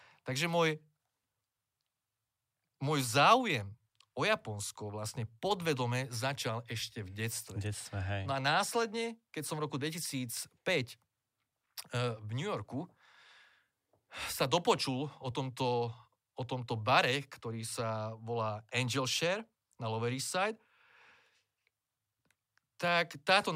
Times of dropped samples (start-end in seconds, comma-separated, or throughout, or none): 22.88